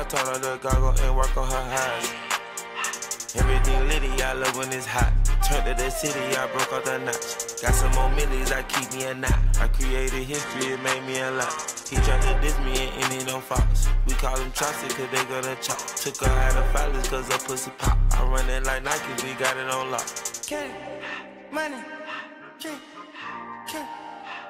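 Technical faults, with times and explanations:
10.33–12.33 s: adaptive stream at a lower bitrate. For two seconds the stream falls back to a much leaner encoding, which fits a switch to a roughly 16 kbit/s HE-AAC rendition. Content above 12.3 kHz vanishes. Unlike a dropout or packet-loss concealment, there is no gap or stutter: the quality steps down and back up abruptly with uninterrupted playback.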